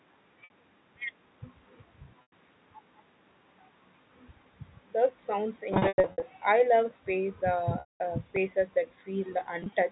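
At 0.44 s, 60 ms of the speech drops out and the receiver bridges it with packet loss with pitch repetition. The last pitch period loops, so the sound holds briefly with a buzzy edge. The same happens for 100 ms at 2.22 s. Between 5.74 and 6.22 s, about 280 ms is lost in scattered gaps over 480 ms, the longest 100 ms, giving a choppy stretch. At 7.8 s a 200 ms loss is long enough to fade toward silence before the speech cross-fades back in. On a spectrogram, each gap shows as frozen, perfectly regular harmonic lines that darken as they fade. The waveform shows identical repeating cycles with a decaying envelope.

At 8.36 s a repeated buffer plays the same 1.33 ms piece two extra times, which fits a 64-sample buffer. It is too short to hear as a stutter and comes across as a tiny click or brief buzz. The waveform shows a few identical cycles with hard joins, and the spectrogram shows a thin vertical broadband line.

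At 9.6 s, 60 ms of loss scattered over 120 ms, in runs of no more than 20 ms, brings a last brief flutter of repeated pitch.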